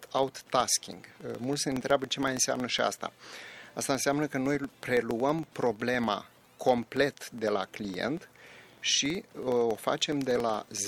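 Running through the whole clip is a low, regular ticking that blurs into a buzz at about 21.5 Hz, the signature of a filter restarted on every block. The filter discards its memory at each block boundary and starts again from silence, so every block opens with a small transient. A repeat of roughly 46 ms fits a 2048-sample block. On a spectrogram this shows as evenly spaced thin vertical stripes; on the waveform, as small spikes at each boundary, growing larger where the sound is louder.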